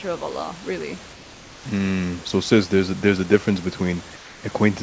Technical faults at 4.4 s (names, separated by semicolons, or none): comfort noise in place of the background